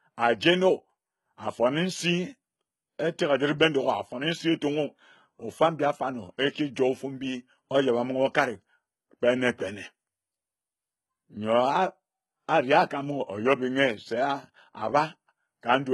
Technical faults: HE-AAC compression

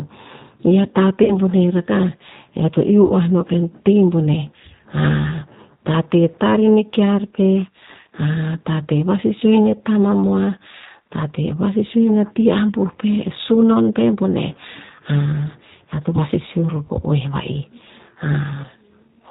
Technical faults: G.729 codec; VoIP packet loss concealed by the speech codec

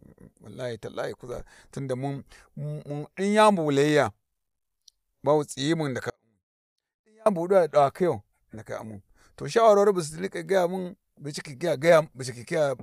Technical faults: audio dropout to a faint residue

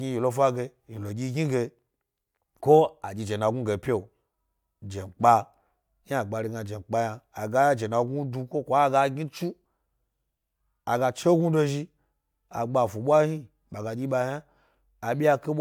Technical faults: none

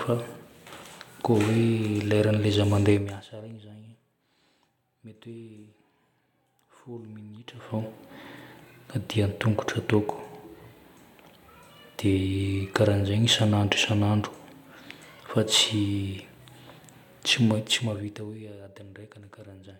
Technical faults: none

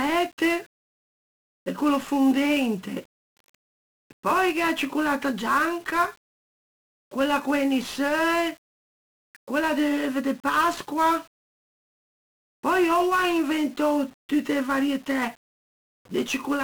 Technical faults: 1-bit DFPWM compression

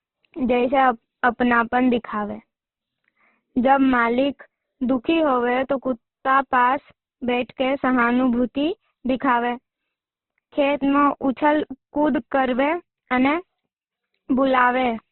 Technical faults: Opus compression

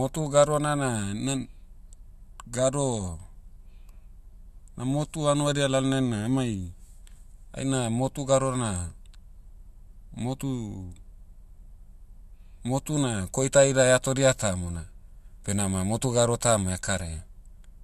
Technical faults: none

